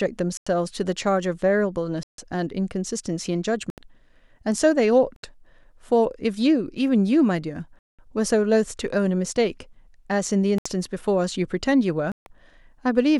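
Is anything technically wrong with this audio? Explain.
Yes. The speech drops out seven times, at 0.37, 2.03, 3.70, 5.16, 7.79, 10.58 and 12.12 s, in what is likely a Bluetooth stall: interference delayed packets, the receiver's buffer emptied, and playback halted until retransmissions arrived. Each gap is dead silence lasting roughly 70 to 200 ms before the speech resumes.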